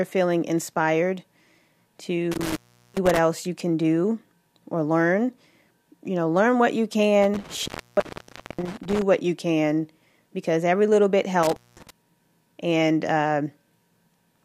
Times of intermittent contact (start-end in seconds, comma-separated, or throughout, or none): 2.32-3.19, 7.22-9.02, 11.43-11.90